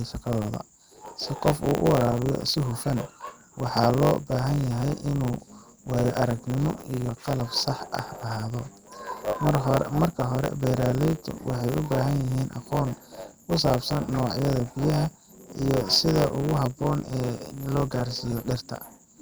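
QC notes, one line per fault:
throughout, block size mismatch (truncated): a steady 100 Hz buzz sits under the speech, which runs about 1.09 times fast at roughly normal pitch. Each block is written longer than the next stage reads, so every block's tail is discarded, leaving a seam 100 times per second.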